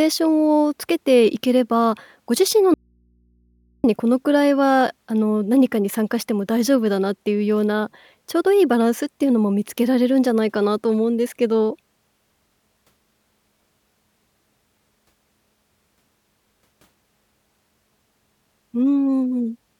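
From 2.74 to 3.84 s there is an audio dropout to a faint residue. Speech cuts abruptly to faint hum. The signal was likely lost while the input stayed live.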